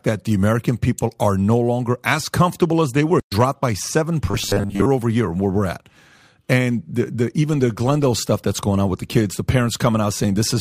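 In this speech clip, the player likely ran out of data or had its output thread blocked just after "as comfortable as they", producing a playback stall from 3.20 to 3.32 s. For those 120 ms the output falls silent in mid-flow, leaving an audible hole in the sentence before the sound picks up again. The gap is long enough to hear as a hiccup rather than a natural pause. From 4.27 to 4.87 s, just before "over year where we're", new audio likely arrived too seldom, so the software kept filling the time by replaying its last short buffer while the real audio was skipped. This produces robotic sound from repeated short buffers. About seven tenths of that stretch is repetition, and each loop lasts about 10 ms, which imposes a fixed 100 Hz buzz. The speech turns into a rigid, metallic drone that only loosely tracks the words for just over half a second.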